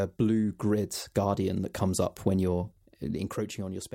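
Zipper noise runs from 2.52 s to the end of this speech clip at 3.95 s, starting just after "that comes up when". The level drops by roughly 10 dB in unsmoothed 3 dB steps, about three a second, and each step leaves an audible tick on the sound.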